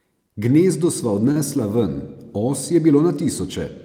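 A short stall from a late packet occurs at 1.31 to 1.37 s: the jitter buffer ran dry, so the speech is stretched about 40 ms, held with a faint buzz or dip, nothing lost.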